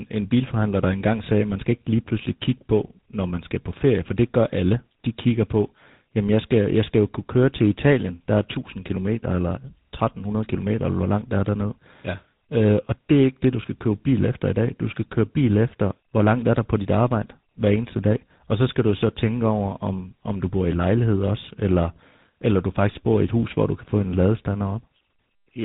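Throughout, the speech shows tandem speech coding. Two speech coders ran in a row, the second re-coding the first's degraded output. The sound is rough, warbly and muffled, with nothing above 3.8 kHz.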